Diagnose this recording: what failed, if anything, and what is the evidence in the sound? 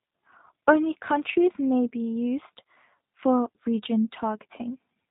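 The failure is at the codec stage. The speech passed through a G.729 codec, and the roughness, which suits the 8 kbit/s G.729A variant, is plainly audible from start to finish. The codec discards the waveform and rebuilds each 10 ms frame from a vocal-tract filter, a pitch predictor and a few pulses, so nothing above 4 kHz survives. The voice sounds band-limited, slightly buzzy and synthetic, and intelligible but roughened throughout.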